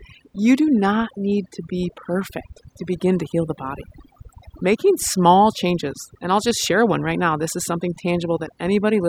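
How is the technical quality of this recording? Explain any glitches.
The recording has one clear problem: overdone noise removal, present from start to finish. The noise reducer was pushed too hard, so it keeps knocking out frequency bands near its noise estimate, taking quieter parts of the speech too. The background drops and breaks up into little twinkling specks.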